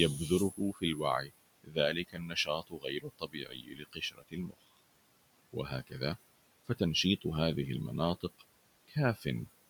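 Speech, with noise suppressor artifacts throughout. The room noise, about 18 dB below the speech, is pushed down by about 21 dB between phrases. The suppressor also cuts speech, mistaking it for noise. This happens from 0.18 to 1.32 s, 1.64 to 4.8 s, 5.53 to 6.01 s, and 8.88 to 9.47 s. Drops reach about 17 to 22 dB. Soft sounds are swallowed, about two seconds' worth in the second stretch.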